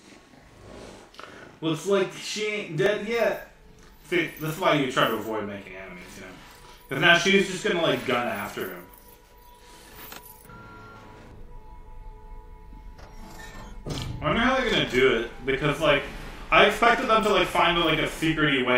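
From start to finish the audio carries a channel delay (doubling): one channel runs about 40 ms behind the other, and when the two are summed to mono the late copy lands as a distinct second attack at equal strength. The result is a slap-like doubling on every onset. Unlike reverb, there is no decaying tail, only one clean repeat. Unlike comb-filter phasing from a sub-millisecond offset, the gap is long enough to hear as two separate events.

At 2.86 s and again at 6.02 s there is a repeated buffer. New audio arrived late, so the device replayed its last tiny block, a piece about 2.7 ms long, which fits a 128-sample buffer. At 2.86 s the block plays once more, and at 6.02 s it repeats twice. Each repeat has hard joins and cuts a few milliseconds of fresh sound. Because the block is so short, this is heard as a click or a brief buzz rather than a stutter. It differs from a plain dropout because the gap is filled with a repeated block instead of silence.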